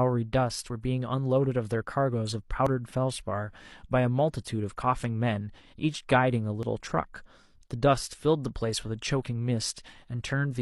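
Speech with an overlap between stream segments: brief clicks or skips at 0.7 s, 2.67–2.69, 4.64–4.68, 6.63–6.66 and 8.62–8.64 s, spaced about 2 s apart, matching 2-second segments. Unlike a dropout, no silence is inserted; roughly 14–37 ms simply vanishes and the waveform jumps.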